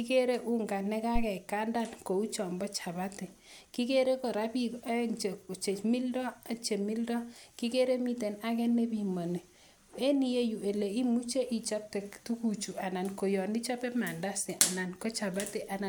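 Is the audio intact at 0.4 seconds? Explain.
Yes, the speech at 0.4 seconds plays through cleanly, with no dropout, click, distortion or other fault at that moment.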